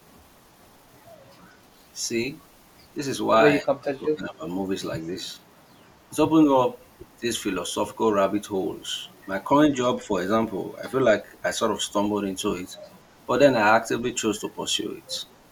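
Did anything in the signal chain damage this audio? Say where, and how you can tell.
Yes. Both faults come from the call processing. The speech dips at 3.61–4.43 s, by about 25 dB at its deepest, and again briefly at 10.03–10.1 s, by about 5 dB. This is speech suppressed in double talk, likely from an echo canceller ducking near-end speech while the far end talked. Unlike a network dropout, the level sags rather than going to silence.

A faint repeat of the speech, about 40 dB down, trails it by 182 ms at 5.49–5.66 s, 12.84–13.25 s and 15.27–15.48 s. This is echo leak, likely a far-end loudspeaker echo the canceller failed to remove. The fixed delay sets it apart from room reverberation, which decays smoothly instead.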